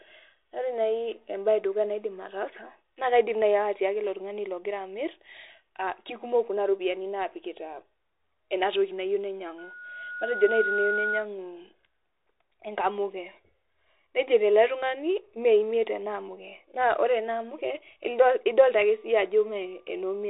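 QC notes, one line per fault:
Throughout: Bluetooth CVSD headset codec. The speech is band-limited, with nothing above about 3.8 kHz, which gives the dull, boxy narrowband headset sound. A granular hiss sits under the speech, sibilants turn scratchy, and louder high-frequency passages break up because the codec's one-bit delta steps cannot track them fast enough. The damage is plainly audible and fits a 64 kbit/s CVSD stream, where each sample only signals up or down and the step size adapts.
9.58–11.28 s: loudspeaker feedback squeal. A single tone at 1.4 kHz swells out of the speech over roughly a second and reaches about the same level as the speech before it cuts off. The microphone picked up the loudspeaker it was feeding, and at 1.4 kHz the loop gain exceeded one. That frequency reinforced itself on each pass around the loop.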